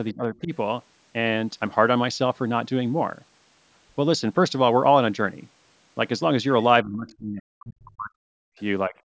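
A speech recording from a call, where the echo canceller likely failed to separate the talker from the loudspeaker during double talk and turned both down. The result is speech suppressed in double talk: brief dips of roughly 15 dB between 0.1 and 0.52 s and again at 8.88 to 8.95 s, and a much deeper cut from 6.83 to 8.56 s, where the voice falls away by around 40 dB and breaks up for well over a second. Inside that stretch, the same canceller likely left part of the loudspeaker signal in the microphone path. From 7.08 to 7.15 s this is heard as the other side's voice leaking through, a faint scrap about 30 dB below the talker.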